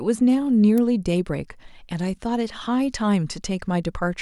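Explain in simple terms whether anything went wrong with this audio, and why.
Something did go wrong, once. At 0.78 s there is a sharp snap laid over the speech. It lasts only a few thousandths of a second. This fault is called an electrical switching spike. The likely cause is a nearby switch, motor or static spark. That tiny arc throws a burst of electrical noise into the audio cable. The recording picks it up as a click.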